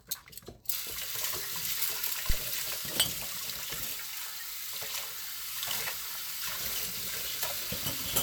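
A phantom power thump occurs at 2.30 to 2.39 s. A supply was switched on or off while the input was live, and the sudden DC step passed through the coupling capacitors as a low-frequency pulse. It is heard as a short, deep thud that peaks at about −15 dBFS and dies away in roughly 21 ms. The whole disturbance lasts under a tenth of a second.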